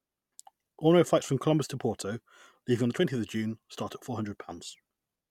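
No technical faults can be heard at any point in the speech.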